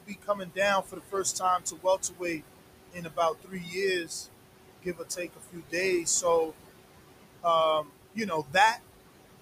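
Noise suppressor artifacts run through the whole clip. The suppressor pulls the room noise, which sits only about 9 dB under the speech, down by about 21 dB between phrases, then lets it back up beneath them. The result is a pumping, warbling residue, unlike a steady hiss or a gate's clean on-off switching.

Speech cut by the noise suppressor occurs at 0.00 to 2.42 s, 2.92 to 4.26 s, 4.78 to 6.53 s and 7.82 to 8.78 s. Here the suppressor mistakes soft parts of the speech for noise and drops them by about 21 to 22 dB, over roughly a second and a half, under a second, about a second, and under half a second respectively. Consonants and endings sound swallowed rather than clipped or dropped out as in a network gap.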